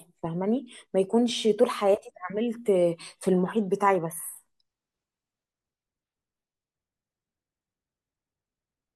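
No dropouts, clipping, glitches or other technical faults are audible anywhere in the recording.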